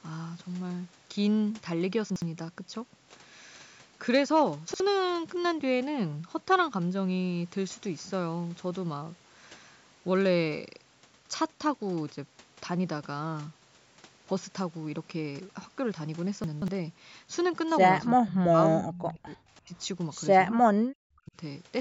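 Chunks out of order at 2.1–2.22 s, 4.68–4.8 s and 16.44–16.68 s: a 60 ms chunk plays late, one chunk late in the first two and three chunks late in the third, so the sound jumbles. Speech suppressed in double talk at 18.11–18.59 s, 18.83–19.41 s, 19.61–19.75 s and 20.5–21.35 s: the voice drops by roughly 40 dB in pieces (about 35 dB in the third), likely because an echo canceller mistook it for loudspeaker echo while both sides talked.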